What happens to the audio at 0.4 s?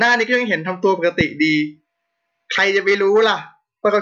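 Nothing goes wrong at 0.4 s: the speech plays through that moment intact, with no dropout, click or distortion.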